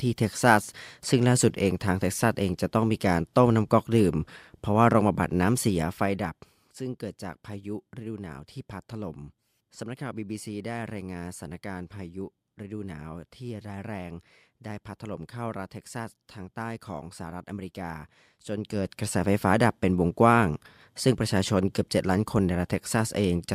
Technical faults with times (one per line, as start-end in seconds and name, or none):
5.63-6.66 zipper noise
18.35-19.11 zipper noise